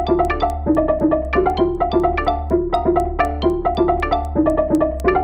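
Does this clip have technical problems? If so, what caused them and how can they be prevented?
Yes: resampler restarted on every block, 16 kHz to 48 kHz per 250 ms block, leaving edge errors heard as regular ticks at 4 Hz throughout. Prevent it by carrying resampler filter state across blocks.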